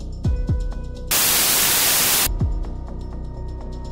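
From 1.11 to 2.27 s, samples built from the wrong bytes: misassembled byte order makes low bits dominate, giving loud broadband hiss, unlike clipping's harsh distortion that tracks the sound's shape.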